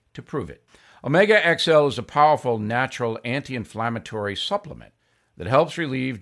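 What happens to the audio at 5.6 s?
Nothing goes wrong at 5.6 s; the audio is intact at that moment.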